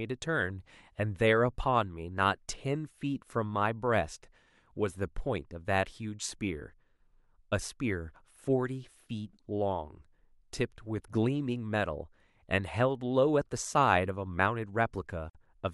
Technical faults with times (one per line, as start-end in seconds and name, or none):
15.30-15.35 gap at a join of encoded pieces